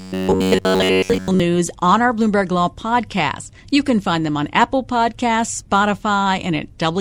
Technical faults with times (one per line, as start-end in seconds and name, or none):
0.01-1.40 robotic sound from repeated short buffers